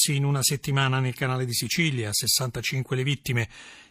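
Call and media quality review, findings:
Call and media quality review findings: no faults found in this speech clip.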